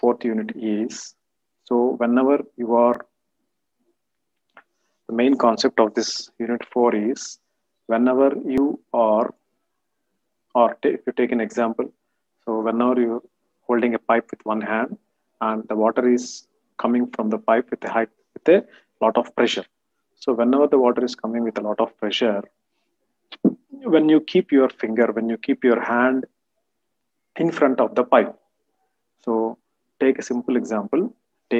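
Three times the recording software likely failed to collect its samples before the hardware overwrote them, a dropped buffer (overrun). The lost stretch is simply cut out and the two sides butt together, so there is no gap of silence. Instead the sound jumps forward at 2.94 s and 8.58 s, each skipping roughly 20 ms, and at 24.69 s, where about 10 ms goes missing.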